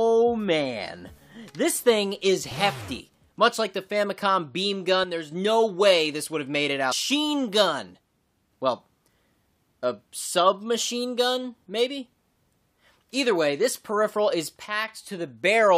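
A likely one channel drops out fault comes first. For about 0.28 s, from 5.04 to 5.32 s, one side of the stereo feed appears lost. Once the two sides are folded to mono, whatever both shared sinks abruptly by about 6 dB and anything carried only on the missing side vanishes. The result is a sudden thin, quieter stretch that snaps back to full level.

At 6.91 s comes a likely stream segment skipped fault. A chunk of the segmented stream apparently failed to arrive, and playback moved straight on to the following piece. A portion of the programme is simply gone, and the audio leaps forward at that point with a small blip at the join.

The same one channel drops out behaviour returns from 14.66 to 14.88 s, about 0.23 s long. Again a channel has likely cut out, giving the same abrupt drop of about 6 dB in the shared material and loss of anything unique to that side before full level comes back.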